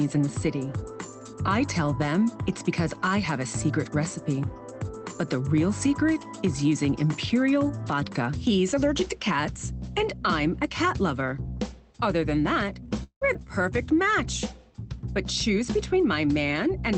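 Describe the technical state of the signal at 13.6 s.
At 13.6 s the audio is inside a jitter buffer slow-down running from 13.39 to 13.95 s. The receiver, short of buffered data, repeated single pitch periods to add 48 ms, so the sound plays at 93% speed with unchanged pitch and slightly drawn out. A waveform shows near-identical cycles repeated back to back, and a spectrogram shows harmonics stretched in time but not shifted. Throughout, the call codec's band limit appears as an empty region above 8 kHz.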